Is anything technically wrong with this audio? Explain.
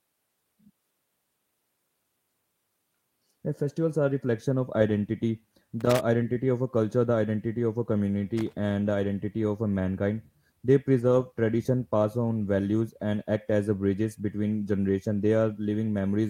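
Yes, there are two kinds of technical fault.

Loose connector crackle, at 5.80 to 5.99 s (after "are reflection of identity", before "identity of a culture") and 8.38 to 8.53 s (after "the identity of a", before "and the identity of"): a worn or dirty contact in the signal chain shifted and repeatedly lost and regained connection. That chops the speech into fragments, and any DC on the line adds pops each time the contact closes. Each time, it comes through as a short, irregular burst of scratchy crackle lasting under 0.2 s.

Lost packet rebuilt from error correction, at 10.99 to 11.25 s, just before "tradition pass on values": seven separate packets went missing in transmission. The decoder filled each one from the reduced-bitrate copy carried in the following packet, so playback never drops out. Those stand-in frames sound rougher and grainier than the surrounding speech.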